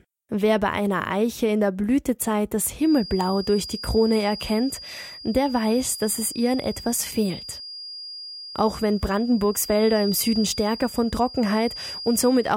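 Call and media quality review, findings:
Feedback whistle from 2.77 s to end of clip. Thin steady tone at 4.8 kHz, about 15 dB below the speech, level swelling and fading slowly. Likely speaker-to-mic acoustic loop held at the edge of feedback. Tone sustains without runaway.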